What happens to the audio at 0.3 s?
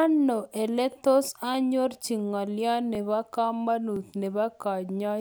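Nothing goes wrong at 0.3 s; the speech passes through intact at that moment, with no dropout, click, distortion or other fault to be heard.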